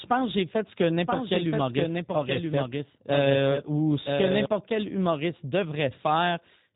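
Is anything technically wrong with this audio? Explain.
Yes. Throughout the speech, the sound is rough and faintly synthetic, with nothing above 3.8 kHz. This is plainly audible G.729 codec damage: each 10 ms frame is rebuilt from a vocal tract filter, a pitch predictor and a few pulses, which fits an 8 kbit/s G.729A stream.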